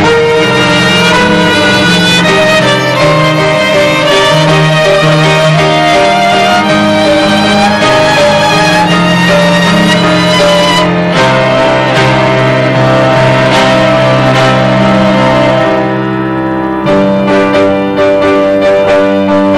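Hard clipping runs throughout: driven about 12 dB past its limit, around a third of samples get cut flat, giving fuzz on loud sounds, squared-off waveform tops and high-frequency harmonic smear.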